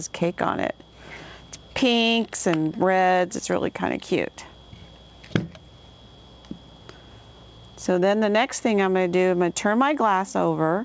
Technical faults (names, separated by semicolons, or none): none